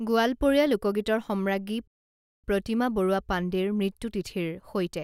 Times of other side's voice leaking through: none

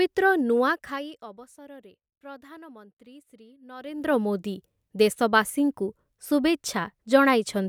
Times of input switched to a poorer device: none

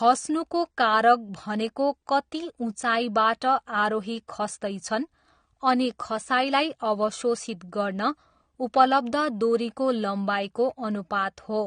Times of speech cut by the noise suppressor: none

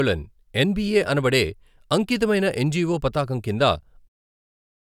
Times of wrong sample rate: none

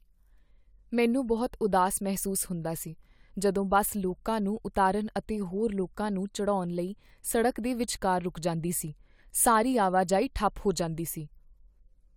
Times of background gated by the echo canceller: none

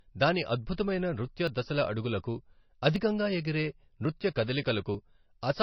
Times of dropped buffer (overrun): 1.47, 2.96, 4.05, 4.95

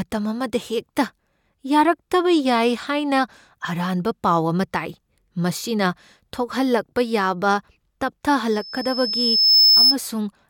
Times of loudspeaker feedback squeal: 8.50-9.96

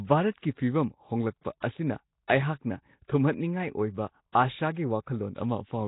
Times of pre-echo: 0.31-0.43, 2.27-2.30, 4.32-4.35

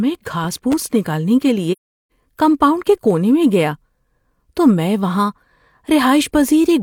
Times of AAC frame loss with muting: 1.72-2.10

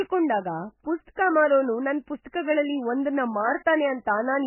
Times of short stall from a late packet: none

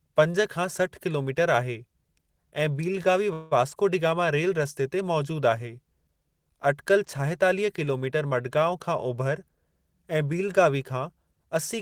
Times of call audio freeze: 3.33-3.53

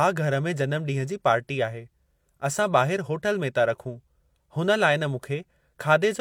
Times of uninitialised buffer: none

